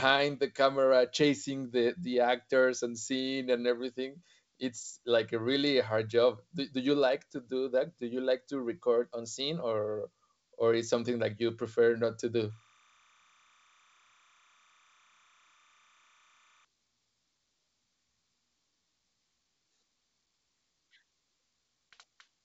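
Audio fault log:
12.50–16.65 s timecode bleed: a faint chirping warble sits behind the speech, roughly 35 dB below it. Linear timecode is leaking in from a neighbouring track or cable. Its square wave flips between tones near 1 kHz and 2 kHz as the bit pattern changes, and the pattern repeats at the 29.97 frames-per-second rate, giving the steady rhythmic chatter. The G.722 wideband coding passes nothing above about 7.7 kHz.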